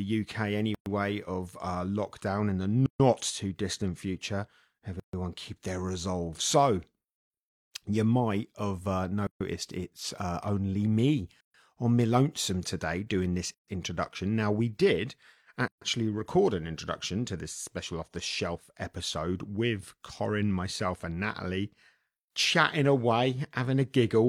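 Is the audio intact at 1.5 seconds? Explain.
Yes, at 1.5 seconds the speech plays through intact, with no dropout, click, distortion or other fault to be heard at that moment.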